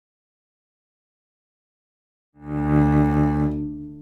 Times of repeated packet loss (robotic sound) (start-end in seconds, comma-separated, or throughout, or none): none